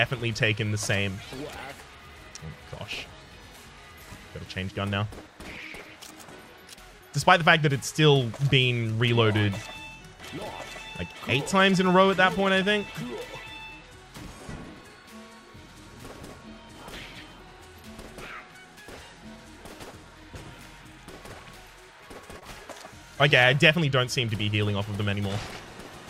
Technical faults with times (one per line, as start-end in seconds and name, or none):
22.39-22.43 short concealed packet loss